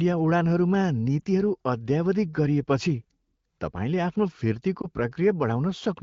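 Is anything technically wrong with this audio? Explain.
Yes. Lost AMR speech frames at 1.20 to 1.24 s, just before "अद्यावधिक गरिएपछि", and at 4.81 to 4.86 s, just after "तपाईँले आफ्नो". The decoder briefly repeated its last good frame with falling gain, causing a short dip or warble that fits one missing 20 ms frame.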